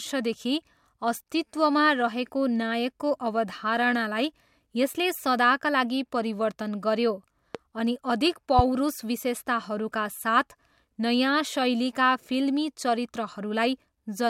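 A sharp, loud pop cuts across the speech from 7.55 to 7.57 s, peaking about 10 dB above it. A second, harder one follows from 8.59 to 8.62 s at about 15 dB, and the speech carries on underneath both. These loud pops are likely brief voltage pulses, from a switch, static or a driver glitch, added to the signal. The circuits after them shaped each into a single thump about 30 ms long.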